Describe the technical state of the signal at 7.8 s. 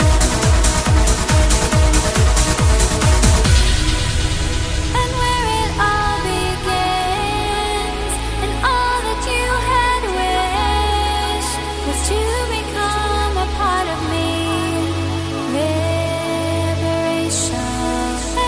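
At 7.8 s the signal is intact, with no audible fault of any kind at that moment.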